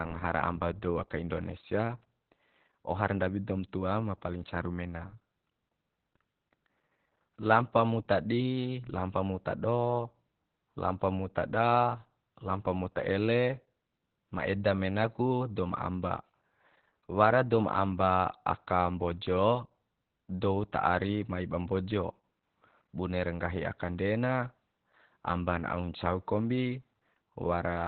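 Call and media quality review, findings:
Speech muffled, hoarse, faintly robotic, whole clip. Nothing above about 4.3 kHz; top band gone, sibilants dull. Component: Opus voice compression, SILK linear-prediction coder in narrowband mode. Mechanism: band limited to 4 kHz, excitation coded coarsely, giving the rough, buzzy texture; damage heavy. Sound fits a bitrate near 8 kbps and 20 ms frames.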